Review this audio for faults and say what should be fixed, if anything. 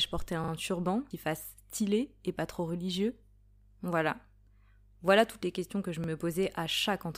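Two repeated-buffer stutters in this speech. At 0.44 to 0.52 s, right after "porter un" and before "turban qui fasse stylé", a short slice plays three times with hard joins. At 6.04 to 6.08 s, after "les questions que je", one slice plays twice. The repeated piece fits a 40 ms buffer, and little or nothing seems to be lost. Fix it by giving the playback path a bigger buffer or more scheduling headroom so it never runs dry.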